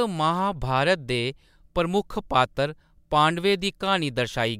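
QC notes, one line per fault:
Nothing stood out on listening to this speech clip.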